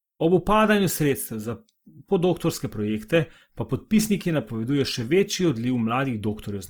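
Throughout the speech, the voice sounds rough, noisy and grainy, though the top end stays open up to about 20.3 kHz. The likely cause is Opus compression in its music mode, refilling starved bands with folded or noise energy, which fits roughly 24 kbps.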